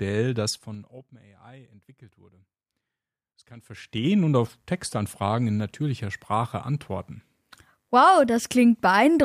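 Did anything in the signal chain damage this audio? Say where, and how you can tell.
Yes. A ticking zip rides on the speech from 0.46 to 1.12 s while the level falls by about 25 dB, and again from 3.53 to 4.09 s as it rises. This zipper noise comes from gain moving in unsmoothed 3 dB steps, around fifteen a second, each one clicking.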